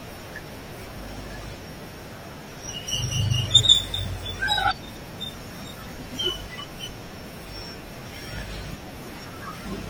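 Compressed frames skipped at 3.59 to 3.61 s and at 7.10 s. The speech jumps ahead, roughly 100 ms, then roughly 50 ms.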